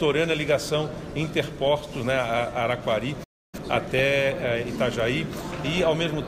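Weak DAB reception lets bit errors slip past error correction into the MP2 data, so corrupted samples and scale factors make individual sub-bands jump in level. At 1.64 to 1.67 s this DAB burbling gives a brief bubbling squelch over the sound.

At 3.23 s the output cuts to silence for about 0.29 s before resuming at 3.55 s. This playback stall likely comes from the player running out of data or its thread being blocked, leaving a gap in mid-flow.

Burbling returns from 3.76 to 4.00 s, a longer run of chirping, muddy bubbling where several consecutive frames of sub-band data arrive damaged.

From 4.68 s to the end, current drawn by the USB bus in 1 ms frames leaks into the audio through power or ground. This USB whine is a steady 1 kHz tone at about 35 dB below the signal.

A final stretch of DAB burbling at 5.65 to 5.81 s layers squelchy, gurgling sub-band jumps on top of that whine.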